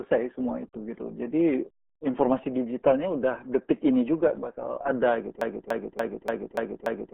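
From the first moment the speech has that muffled, gargly quality of the RealAudio 14.4 codec, the old dial-up speech coder. Everything above about 3.8 kHz is simply gone, so consonants lose their edge and the voice sits in a narrow telephone-like band. That heavy squashing fits an 8 kbit/s RealAudio 1 stream, where the codec throws away most of the detail and leaves a smeared, watery texture on every syllable.

Then at 5.41 s it turns into a broken-record loop that runs right to the end. A fragment of about 290 ms plays back to back, identical each time, six times over. What's likely happened is the player or stream stalled and just kept resending the last chunk it had buffered. Whatever should have played in those closing seconds never comes through; you only get that stuck stutter instead.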